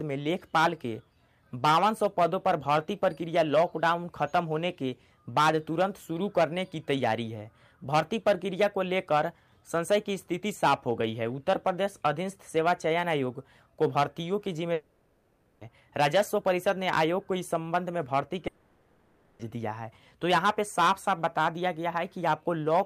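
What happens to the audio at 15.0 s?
At 15.0 s the sound gives way to a smeared, buzzy continuation of the preceding audio from 14.73 to 15.63 s, most likely a long network dropout: the receiver fills the missing 0.9 s by extending the last sound, rather than briefly patching a single short packet loss.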